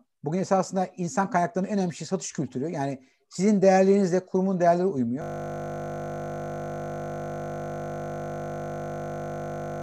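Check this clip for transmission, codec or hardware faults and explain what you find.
One hardware fault is present: a system hang loop. It starts at 5.22 s, right after "sizin değerlerinizle kurumun değerleri", and runs to the end. The system froze while the sound hardware kept replaying one 20 ms slice hundreds of times. This produces a steady 50 Hz buzz.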